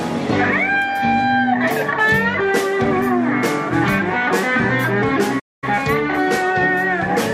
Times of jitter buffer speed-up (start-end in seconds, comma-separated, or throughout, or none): none